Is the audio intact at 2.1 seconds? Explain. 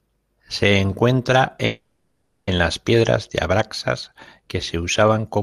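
No. A call audio freeze runs from 1.65 to 2.49 s, where the last sound is stretched into a fading buzz for about 820 ms before "las piedras de abraxas" resumes. Nothing is lost, just delayed, likely because held-up packets emptied the jitter buffer.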